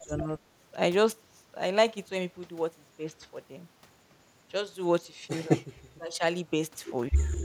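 From 0.04 to 0.32 s, the speech drops sharply, by roughly 25 dB at its deepest. At 5.52 to 5.66 s it nearly vanishes, sinking about 30 dB. From 5.9 to 6.24 s a shallower dip of around 15 dB turns it down again. This is speech suppressed in double talk. The likely cause is an echo canceller that heard both sides at once, took this talker for echo and turned it down.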